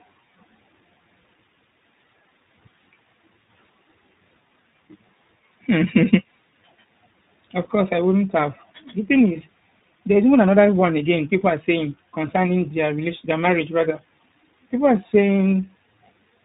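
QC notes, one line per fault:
throughout, tandem speech coding: speech sounds rough, muffled and warbly, nothing above 3.8 kHz, because it passed through two speech codecs in a row, ending with iLBC.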